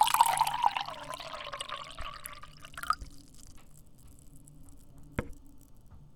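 No technical faults are audible.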